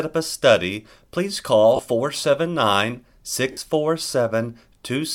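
At 1.76 s, right after "a study please call", the speech briefly smears into a noisy hiss, and again at 3.52 to 3.57 s. These are lost LE Audio frames, about 30 ms and 50 ms long, which the LC3 decoder concealed with its last spectrum under random signs.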